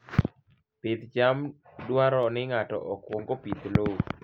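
At 2.23 s, between "cham dwaro" and "ni ng'ato", a single sharp click reveals dropped samples. Likely a fraction of a millisecond went missing, so the waveform leaps straight to a later value. Unlike a dropout, no sound disappears and no silent gap opens.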